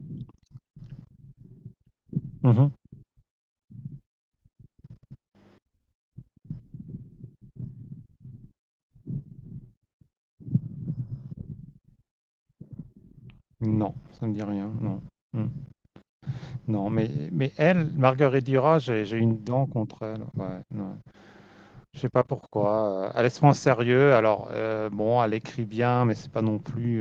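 No technical faults detected.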